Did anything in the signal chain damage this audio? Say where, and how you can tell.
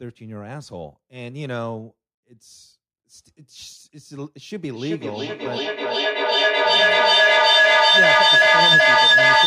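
Yes. From 4.67 s to the end at 9.47 s the speech is overtaken by a feedback howl, an acoustic loop between two devices on the same call in one room. Each trip from loudspeaker back into the microphone adds level, so a tone near 1.5 kHz swells to about 14 dB above the speech, with the loop's delay roughly 0.4 s. Ordinary echo repeats fade; these grow and narrow to one pitch.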